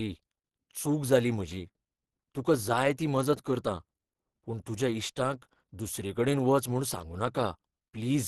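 Speech with Opus compression damage throughout, likely from low-rate encoding in hybrid speech mode that fits about 16 kbps: the voice sounds muffled and hoarse, and a spectrogram shows a flat ceiling with nothing above 12.2 kHz.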